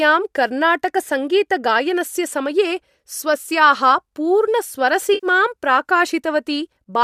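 At 5.14 to 5.27 s, AAC frame loss with concealment occurs. The decoder rebuilds the missing audio from earlier spectrum. It sounds like a smeared, noisy patch.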